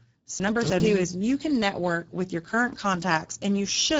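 From the start the speech carries Speex codec damage, plainly audible as a hoarse, noisy texture. The sound fits roughly a 10 kbps setting, where the excitation gets too few bits. A spectrogram shows nothing above 7.7 kHz and a smeared, noise-like band above 4 kHz.

Between 0.4 and 0.8 s, just before "is you can network", there is a case of chunks out of order: a 100 ms chunk plays three chunks late. This gives a jumbled moment, and the waveform shows three hard joins.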